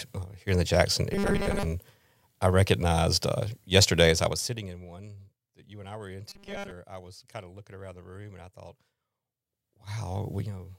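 From 1.14 to 1.65 s, new audio likely arrived too seldom, so the playback kept repeating its last 5 ms or so of sound while most of the real audio was skipped. Those repeats impose a fixed 200 Hz buzz, turning the speech into a rigid, metallic buzz that only loosely tracks the words. This is robotic sound from repeated short buffers. The same fault returns from 6.30 to 6.71 s, with the same 200 Hz buzz.

Between 4.06 and 4.88 s, a level drop of roughly 20 dB is applied in unsmoothed 1 dB jumps, around 30 per second, rather than as a continuous fade. Each jump puts a tiny click into the waveform, and together they form zipper noise, a fast ticking or zipping layered over the speech for as long as the level keeps falling.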